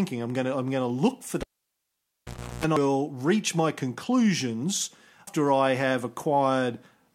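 At 1.41 s, right after "going to look for", a cable pulled and plugged in interrupts the speech until 2.64 s. A pop marks the break, then the signal is gone for about 1.18 s, including roughly 0.35 s of 60 Hz mains buzz while the plug's tip alone makes contact, and a second pop brings the sound back. That pop, hum and pop sequence separates it from a dropout caused inside a file or stream.

Damaged data in a compressed stream then appears twice, at 2.77 s just before "reach my conclusions" and at 5.27 s just after those same words. Each time, corrupted bytes make the decoder misread frames and lose sync before it finds the next valid frame header, leaving a brief chirp, squawk, click or short hole. Unlike the cable fault, neither event has a pop on both sides or any mains buzz.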